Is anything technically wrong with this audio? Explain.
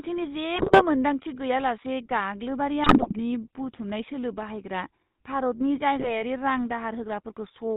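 Yes, two faults are audible in this speech.

GSM full-rate codec, throughout: the speech is modelled as a vocal-tract filter excited by sparse, regularly spaced pulses, which fits the 13 kbps full-rate coder. Nothing passes above 4 kHz, and the voice has a plainly audible buzzy, gravelly roughness.

GSM bit errors, at 0.56 to 0.83 s, 2.84 to 3.14 s just after "गैयालासे गाग्लोबारि", and 5.98 to 6.23 s: corrupted bits reached the decoder, distorting filter, pitch or gain values frame by frame, so the speech breaks into squawks, pops and gargling.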